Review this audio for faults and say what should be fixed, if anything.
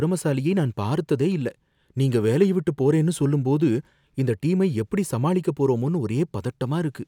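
Nothing needs to be fixed, as no faults turn up anywhere in this audio.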